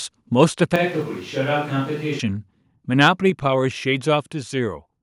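Microphone overload hits this speech clip twice, from 0.40 to 0.44 s and from 3.02 to 3.08 s. The loudest peaks push past the converter's ceiling, about 1 dB over in the first event and about 3 dB over in the second. The tops of the waveform are flattened, so those syllables take on a harsh, crackly edge. The likely cause is input gain set too high. A switch to a distant microphone runs from 0.76 to 2.20 s. The voice abruptly turns roomy and hollow, loses low end, and drops roughly 5 dB in level. More background noise comes in beneath it, at roughly 25 dB below the speech. This is likely the close microphone's feed dropping out and a farther pickup, such as a camera microphone, taking over. The sound snaps back just as suddenly when the close signal returns.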